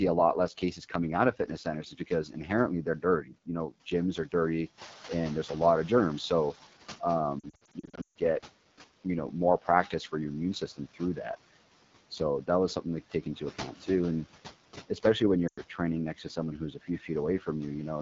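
Throughout the 18 s of speech, noise suppressor artifacts are present. The suppressor pulls down every band it judges to be steady noise by about 11 dB, frame by frame, so the background sinks between words and rises beneath them. This breathing follows the speech itself, which separates it from a genuine change in the room.

The whole clip also carries the AMR wideband (HD Voice) codec. Speech is modelled up to 6.4 kHz, and the top band up to 7 kHz is filled with shaped noise. The codec damage is plainly audible as a rough, raspy texture, which fits AMR-WB's 8.85 kbit/s mode, one of its two lowest rates. Unlike the suppressor's effect, this grit sits on the voice itself rather than on the background.

Just after "know gyms are dirty", the room noise rises by about 11 dB around 5 s, and the noise suppressor is caught catching up from 4.77 to 6.68 s. Its noise estimate lags, so the louder background first comes through with less reduction. 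Over about 1.9 s it sinks as the estimate adapts, by about 9 dB. That gradual settling marks it as the suppressor's lag rather than the room noise simply changing.

Lost AMR speech frames follow from 7.39 to 8.17 s. Losses totalling 440 ms are scattered over 760 ms, with the longest unbroken run 140 ms. During each gap the decoder reuses the last good pitch and vocal tract settings at falling gain, and in wideband this drops to near silence within two frames. The voice returns weak or rough, producing stuttering dropouts rather than the codec's steady rasp. A second loss of 100 ms at 15.47 to 15.61 s falls between "especially when" and "training next to someone", heard as a brief hole in the sound.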